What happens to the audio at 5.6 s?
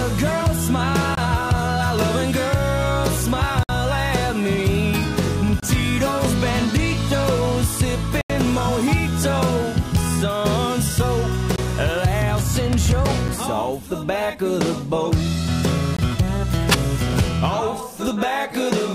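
At 5.60 s the sound drops out abruptly for about 26 ms, to 5.63 s, and cuts back in with no fade. This is a block of digital silence: samples were replaced by zeros, most often because the output buffer wasn't filled in time.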